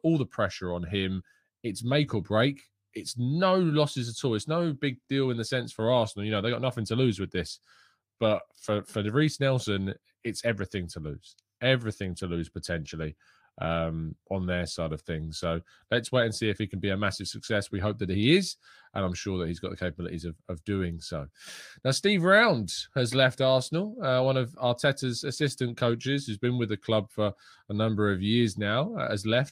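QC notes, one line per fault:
5.03–5.08 s: repeated frames. One 23.2 ms compressed block plays twice more, adding 46.4 ms as a stutter. On a spectrogram, the identical slice appears three times.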